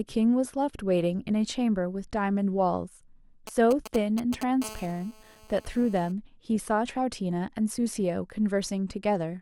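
A 2G phone close to the recording chain was exchanging signalling bursts from 3.47 to 4.43 s, and the audio circuitry rectified those radio pulses. These GSM signalling bursts come through as a galloping dit-dit-dit of short 216.7 Hz buzzes over the speech, roughly 10 dB below it. From 4.62 to 6.12 s the phone was transmitting steadily as in a call, again pulsing at 216.7 Hz. That produces a continuous GSM phone buzz, a hard, raspy tone rich in harmonics and unrelated to the speech, sitting about 21 dB under it.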